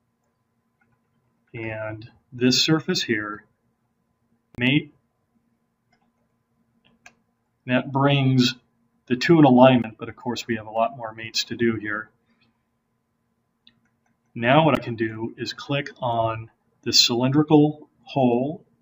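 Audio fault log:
4.55–4.58 s, 9.82 s, 14.75 s: Bluetooth stall. The audio drops to silence for 32 ms, then 16 ms, then 15 ms before continuing. This is likely a wireless link holding up packets until the receiver's buffer runs empty, so playback pauses until delayed data arrives.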